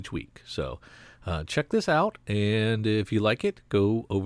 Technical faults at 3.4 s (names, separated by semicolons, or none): none